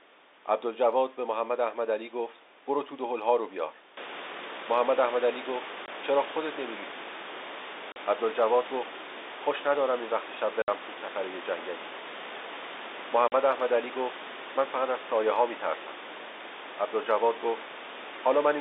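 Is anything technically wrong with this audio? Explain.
Yes. The speech drops abruptly into dead silence four times: 5.86 to 5.88 s, 7.92 to 7.96 s, 10.62 to 10.68 s and 13.28 to 13.32 s, gaps of 20, 40, 60 and 40 ms with hard edges. This is packet loss filled with silence. Whole packets never arrived, and the receiver played nothing in their place. Every gap is a multiple of 20 ms, which points to 20 ms packets, with one to three consecutive packets missing each time.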